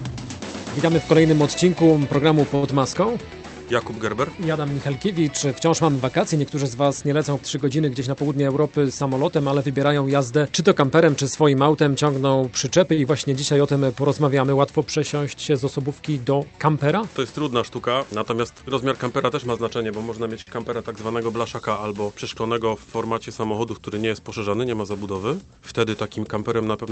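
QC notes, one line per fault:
2.55–2.65 s, 12.94–12.99 s, 20.41–20.49 s: short stall from a late packet. A packet arrived late each time. The jitter buffer ran dry. The receiver held the last sound until the packet came, then carried on from the same point. The stretches last 71 ms, 38 ms and 54 ms. Nothing is lost. A sound simply hangs on too long, with a faint buzz or dip. Each stall adds its own length to the delay.
8.00–8.47 s, 18.40–18.63 s: jitter buffer speed-up. Too much audio had piled up in the buffer. To shrink the delay, the receiver cut out short pitch-period pieces again and again. Pitch stays the same, but the sound runs fast and feels hurried. The first run plays at 113% speed and drops about 70 ms. The second plays at 117% and drops about 50 ms.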